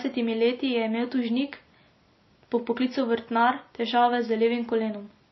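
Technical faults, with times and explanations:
Throughout, transcoding between lossy codecs: the speech seems to have passed through a very low-rate encoder and then been re-encoded by a second one. The damage fits MP3 at around 24 kbit/s followed by WMA at 64 kbit/s, likely in that order. The second encoder's higher rate cannot restore what the first discarded. Nothing survives above 5.8 kHz, and the second pass spends bits copying the first pass's artefacts while adding its own, so both are heard layered together.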